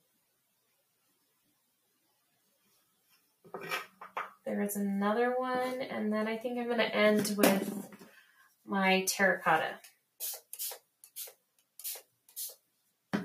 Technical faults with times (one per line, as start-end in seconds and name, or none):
0.00-13.24 noise suppressor applied to music or sounds
0.00-3.48 sound cut by the noise suppressor
7.93-8.68 sound cut by the noise suppressor
9.79-10.21 sound cut by the noise suppressor
10.79-13.12 sound cut by the noise suppressor